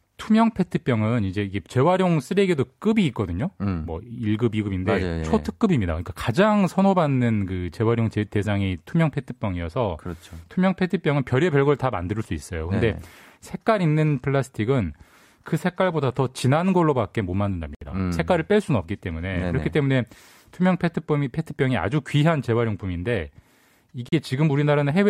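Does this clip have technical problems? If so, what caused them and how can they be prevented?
Yes. The speech drops to dead silence twice, for 66 ms starting at 17.75 s and for 37 ms starting at 24.09 s, then carries on from where it left off. That clean gap-and-resume pattern is most likely a Bluetooth stall: radio interference held back audio packets, the headphones' small buffer emptied, and playback sat silent until the retransmitted packets arrived. Keeping the phone close with a clear line of sight to the headphones, away from busy Wi-Fi, prevents this.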